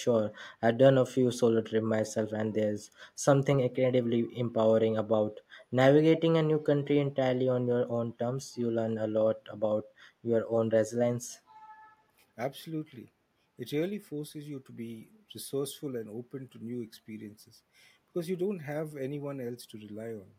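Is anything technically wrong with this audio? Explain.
Yes. From 6.16 to 6.2 s there is a brief echo leak, a faint copy of the speech arriving 345 ms late, likely from a loudspeaker echo canceller letting residue through.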